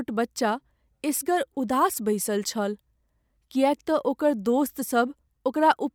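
From start to finish, the speech carries a low, steady buzz at about 46.9 Hz, while the pace stays at its normal 1.0x speed with no audible speed-up. This is a truncated block size mismatch. One stage hands over longer blocks than the next reads, so the tail of every block is discarded. The resulting break repeats once per block, and that rate fits 1024-sample blocks.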